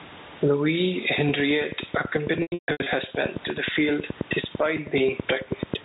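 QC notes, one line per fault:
Throughout: gain pumping. The gain swings by roughly 15 dB, which flattens the level contrast and squashes the sound. This likely comes from gain set far too high, with a fast limiter pulling it down on every peak.
2.42 to 2.86 s: packet loss with pitch repetition. About 340 ms of audio drops out in bursts over 440 ms, the longest run 140 ms. The short gaps sound like a held, buzzy tone from the repeated pitch period. The longer run fades toward silence before speech cross-fades back in.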